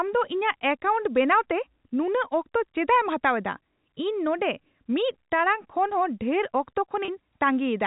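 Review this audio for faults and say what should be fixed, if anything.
Packet loss with pitch repetition occurs at 7.05 to 7.08 s. About 30 ms went missing, consistent with three 10 ms packets. The receiver repeated the last pitch period, giving a brief, slightly held buzz. Adding jitter buffering or forward error correction on the network path would prevent it.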